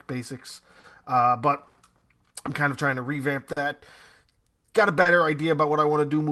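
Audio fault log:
Throughout: clock drift between sender and receiver. The sending clock runs about 3 percent slow, so the receiver's jitter buffer keeps draining and must repeat or stretch short pieces to keep pace. The result is small, unevenly spaced timing hiccups across the clip.
0.80, 1.98, 3.52 and 5.01 s: short stall from a late packet. Each packet arrived 40 ms late and the buffer ran empty, so the receiver stretched the last sound for 40 ms, then carried on. Nothing is lost, but the sound briefly hangs.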